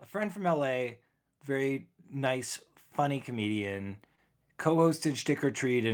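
From 0.11 s to the end, automatic gain rising lifts the level gradually as the gain control compensates for quiet input. The speech and the background noise swell together, which separates it from a speaker simply getting louder.

At 4.15 to 4.19 s, a short concealed packet loss leaves a brief smear where late audio was patched by extending the preceding sound. There is no gap of silence, which distinguishes it from a plain dropout.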